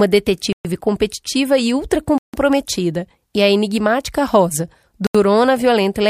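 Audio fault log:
0.53–0.65 s, 2.18–2.34 s, 5.07–5.15 s, Bluetooth stall: speech drops to dead silence for 122, 155 and 79 ms, then resumes, likely from interference starving the headphones' buffer.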